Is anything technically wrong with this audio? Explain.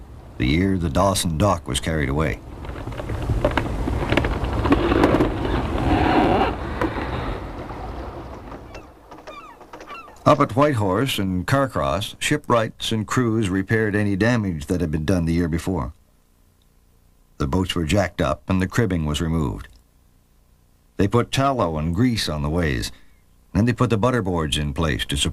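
No, nothing technically wrong can be heard here.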